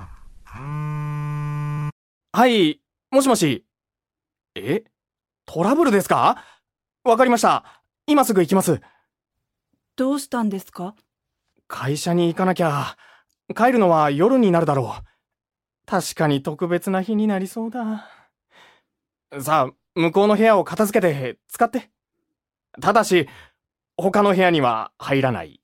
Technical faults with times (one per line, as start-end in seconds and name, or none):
none